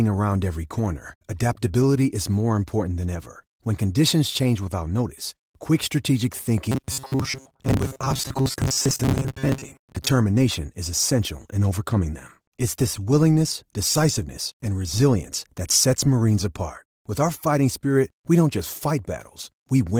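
From 6.72 s to 10.09 s the speech turns into a rigid, metallic buzz pitched at 134 Hz. This is robotic sound from repeated short buffers, likely caused by audio arriving too slowly, so playback fills each gap by looping the last fragment. A 134 Hz buzz fits a loop of about 7.5 ms. Roughly half of the material in that stretch is repetition rather than new audio, so the speech keeps only its rough contour under the imposed pitch.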